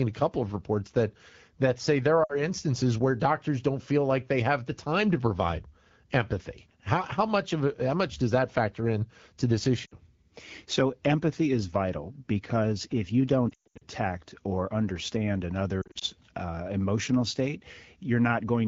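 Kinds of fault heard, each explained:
Lost AMR speech frames: at 2.23, 9.85, 13.50 and 15.82 s, speech frames damaged on the radio link failed their checksum, and the wideband decoder filled each gap by reusing its last good pitch and vocal-tract settings at falling gain. The first two losses cover about 60 ms each. At 13.50 s, about 260 ms is lost across 320 ms, with a longest run of 120 ms. At 15.82 s, 120 ms is lost across 200 ms.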